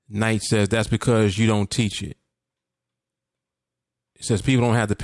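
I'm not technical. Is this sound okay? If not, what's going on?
Yes, the technical side of this speech recording is in good order, with nothing going wrong in how the sound was captured or carried.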